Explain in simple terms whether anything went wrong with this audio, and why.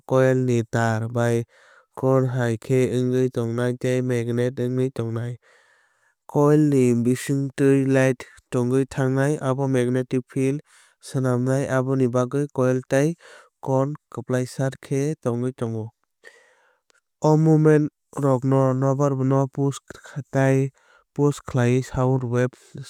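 Nothing went wrong here; it's a recording of someone talking, and there's nothing in it that points to a technical problem.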